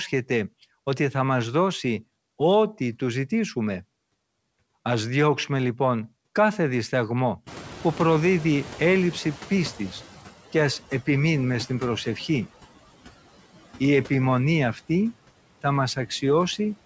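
Noise suppressor artifacts run through the whole clip. The suppressor treats steady background noise as something to remove and lowers each affected band, frame by frame, by about 16 dB. Between phrases the noise drops away. Under the speech it comes back up, so the floor pumps with the talking. Nothing is heard above 8 kHz, which fits a wideband call codec.

From 7.46 s to 10.12 s there is noise suppressor catching up. Around 7.5 s the room noise jumps suddenly, by about 22 dB. The suppressor's noise estimate still reflects the quieter room, so at first the louder noise gets only about 10 dB of reduction and comes through. Over roughly 2.7 s the estimate adapts and the noise sinks. By "και ας επιμείνουμε στην" it sits about 17 dB below the speech.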